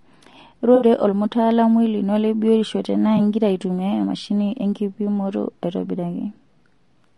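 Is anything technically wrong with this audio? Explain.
Yes. Throughout, the speech has likely passed through low-delay AAC compression at a low bitrate, consistent with around 32 kbps, so coarse quantization adds noise between the harmonics, giving a rough, grainy sound with a thin top band.

AAC frame loss with concealment occurs at 0.75–0.85 s (about 60 ms, fitting three lost frames) and at 3.17 s (20 ms). The decoder patched the gaps from earlier spectra, leaving brief smeared, noisy patches.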